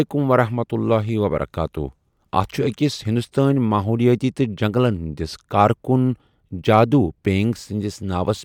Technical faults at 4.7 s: none

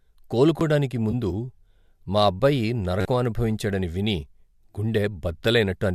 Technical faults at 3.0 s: repeated buffer

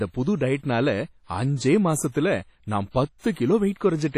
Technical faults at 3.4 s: WMA compression; pre-echo

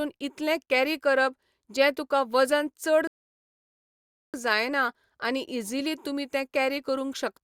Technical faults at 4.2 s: rebuffering stall

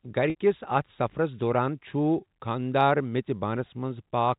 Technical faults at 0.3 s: packet loss with pitch repetition

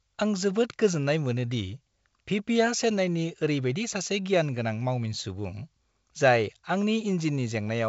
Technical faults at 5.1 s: none

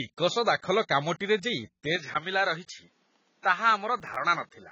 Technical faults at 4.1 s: AAC compression; input switched to a poorer device; processor overload crackle

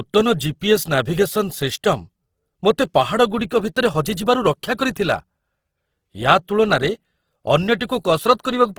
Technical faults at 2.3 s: Opus compression

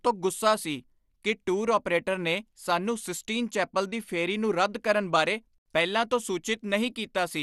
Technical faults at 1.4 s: MP2 compression

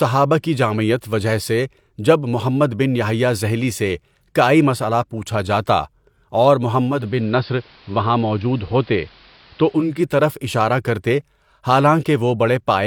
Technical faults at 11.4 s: none

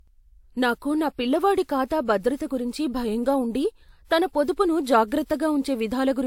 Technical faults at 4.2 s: transcoding between lossy codecs

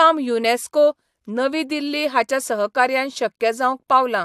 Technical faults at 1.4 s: none

